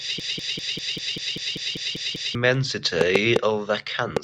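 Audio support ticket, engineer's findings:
Broken-record loop, 0.00 to 2.35 s. Already running at clip start. A 0.196 s fragment repeats back to back, 11 times. Speech from that span is lost. Likely cause: a stalled player, encoder or stream resending its last held buffer.

Train of clicks, 3.01 to 4.18 s. Around four sharp pops at uneven spacing, about 2.6 per second. Peaks sit roughly 15 dB above the speech. The clicks are similar in shape. Likely source: interference from nearby equipment or a faulty connection or power supply injecting pulses.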